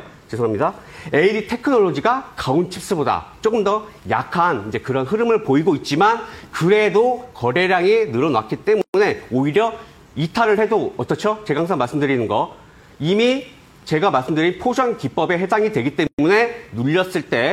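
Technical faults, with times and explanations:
8.82–8.94 s and 16.07–16.19 s, gap at a join of encoded pieces: continuous sound drops into silence lasting 126 ms, then 118 ms, with smeared edges, and resumes where it stopped. Separately encoded pieces were joined untrimmed, leaving encoder start delay and last-frame padding in place.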